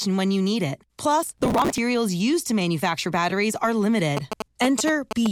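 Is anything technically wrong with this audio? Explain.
Yes, there are two faults. Processor overload crackle runs from 1.23 to 1.78 s, between "when you need it" and "used to manufacture batteries". The processor missed a long run of audio deadlines, which fits buffers of roughly 5 ms. Each missed buffer was skipped, leaving hard-edged gaps heard as gritty tearing. The waveform shows many tiny dropouts, and the spectrogram shows dense broadband vertical streaks.

GSM signalling bursts run from 4.17 s to 5.27 s, starting after "to manufacture batteries are". A nearby 2G phone that is signalling sends radio bursts that the audio circuit rectifies. They are heard as a galloping dit-dit-dit of short buzzes at 217 Hz, roughly 5 dB below the speech. The spectrogram shows grouped vertical lines and harmonics of 217 Hz.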